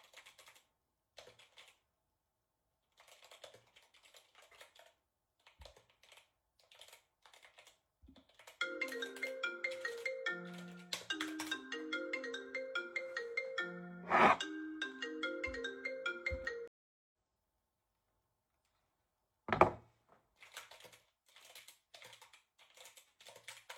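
At 16.68 s the audio drops out completely for about 0.45 s, until 17.12 s. That's a stream reconnect: the connection fell over, the player went quiet, then reconnected and spun up a fresh decoder partway through the stream. When the sound comes back it has jumped ahead by roughly a third of a second, so a chunk of the sounds is simply missing, and the first instant eases back in rather than starting at full level.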